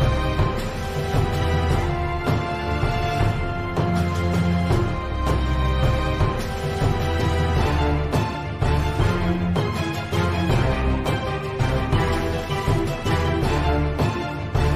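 Compressed frames are skipped at 1.41, 6.44, 8.34 and 11.58 s, where whole frames never reach playback. The audio jumps ahead by roughly 0.2 s, then 0.15 s, then about 70 ms twice.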